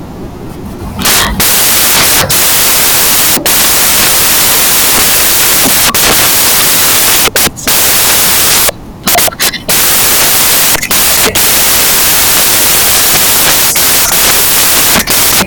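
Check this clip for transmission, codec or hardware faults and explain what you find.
The whole clip is buried in loud, harsh broadband noise, and that's down to samples built from the wrong bytes, running from start to finish. The reader is assembling each sample with its bytes misplaced, whether shifted by one, swapped in order or read at the wrong alignment, so the rapidly changing low-order bits end up as the big part of every value. The speech is swamped by noise that sounds close to white on the louder sounds.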